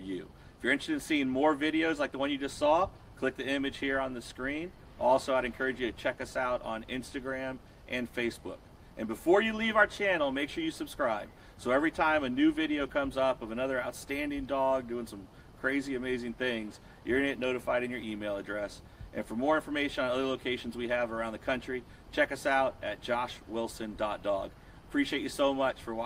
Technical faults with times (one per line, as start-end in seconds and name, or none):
none